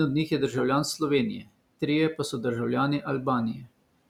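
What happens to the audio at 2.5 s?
Nothing goes wrong at 2.5 s: the speech continues intact, with only the room noise about 25 dB beneath it.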